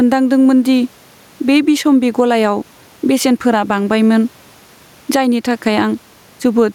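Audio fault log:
Throughout, gain pumping: the input gain is likely set far too high for the microphone, so a fast limiter or compressor clamps down each time the speech gets loud and lets go in the pauses. The level swings by around 10 dB, with the room noise sitting about 41 dB under the speech. Loud and quiet passages land close together, and the speech sounds squashed.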